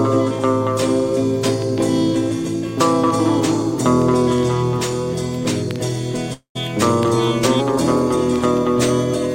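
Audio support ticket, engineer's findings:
Long network dropout, 6.33 to 6.57 s. Incoming packet stream likely stalled; receiver had nothing to play and fell back on concealment. Sound: last audio extended as a decaying buzz/hiss for roughly 0.2 s, then about 0.11 s of near silence. Playback resumes after the gap, with about 220 ms of original audio never delivered and skipped rather than recovered. Check jitter buffer depth and link stability around that timestamp.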